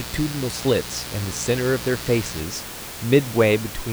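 From the start of the clip to 2.40 s, switching spikes from something like a dimmer, a rectifier or an unshielded run get into the signal path twice in every cycle of the 60 Hz mains, producing mains buzz. Its harmonics stretch from 60 Hz up into the low kilohertz, so it sits over the speech as a steady, raspy buzz, around 15 dB below it, slightly quieter than the room noise underneath, and then stops.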